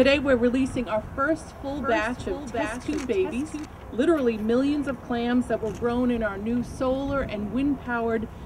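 From 1.67 s to 3.65 s a doubled audio track appears: a full-band copy trails about 0.7 s behind, a few decibels quieter, likely from a second, slower capture path. Unlike an echo, it has no decay or room colour and starts and stops abruptly.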